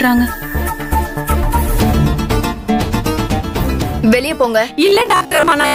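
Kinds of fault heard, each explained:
Robotic sound from repeated short buffers: From 4.86 s to the end at 5.74 s, the sound turns into a rigid, metallic buzz near 67 Hz. The likely cause is a 15 ms stretch replayed over and over, filling about half the time while fresh audio is skipped.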